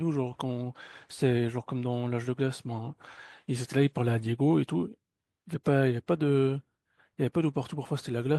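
Nothing technically wrong turns up anywhere in this short speech recording, so there's no problem here to pin to a time or trace to a cause.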